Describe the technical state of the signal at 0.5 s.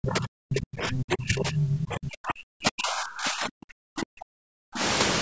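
At 0.5 s the speech sits inside a long stretch of speech suppressed in double talk, running from 0.0 to 4.82 s. The talker's level is pulled down hard, by roughly 40 dB at its deepest. It dips, loses its high end or cuts out in pieces rather than holding steady. The likely cause is both sides talking at once. The echo canceller cannot tell the local voice from the loudspeaker echo, so it attenuates everything together.

Just after, from 0.51 to 0.6 s, there is a brief scrap of the other side's voice leaking through. It sits about 10 dB below the talker. It is a short fragment, not a sustained second voice. This is likely residual loudspeaker echo that the canceller failed to remove from the microphone signal. It happens during the same double-talk period, when the canceller was already struggling.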